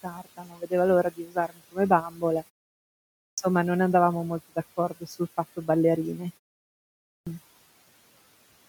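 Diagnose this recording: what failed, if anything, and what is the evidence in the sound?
Speech cut by the noise suppressor, in call processing. Speech dips by up to about 19 dB at 0.03–0.72 s, 1.11–1.78 s and 2.09–2.23 s. The suppressor mistook speech for noise.

Clipped start after a pause, at playback. After pauses of about 0.8 s, onsets at 3.19 s and 7.09 s lose roughly 0.19 s and 0.18 s. The sleeping output device wakes too late.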